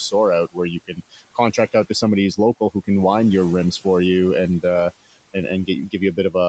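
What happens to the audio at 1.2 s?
Around 1.2 s you're in the middle of speech cut by the noise suppressor, which runs from 0.47 to 1.74 s. The suppressor mistook softer parts of the speech for background and pulled them down by up to about 19 dB, so consonants and word endings sound swallowed, adding up to roughly 400 ms across that stretch. Underneath, the usual noise suppressor artifacts are present too. The residual noise is held down by about 18 dB, pumping between the gaps and rising under the speech.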